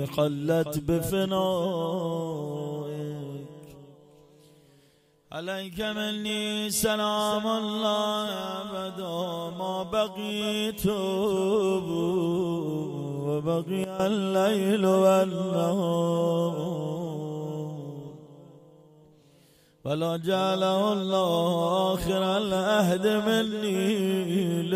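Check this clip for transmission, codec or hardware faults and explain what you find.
One fault stands out: a sudden gain jump from 13.84 to 14.00 s, where the whole signal, background included, drops by about 12 dB at once, with no fade. The likely cause is a digital gain change applied between adjacent samples without any ramp.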